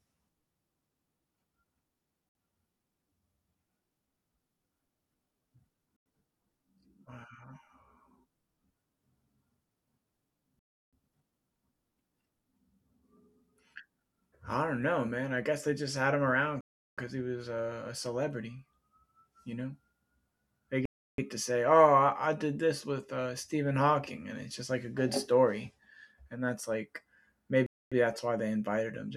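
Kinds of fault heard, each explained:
Bluetooth stall: The speech cuts to dead silence six times, then resumes. The gaps run from 60 ms at 2.29 s to 370 ms at 16.61 s, just after "just had him around". The likely cause is dropped wireless packets emptying the headphone buffer until resent data arrives.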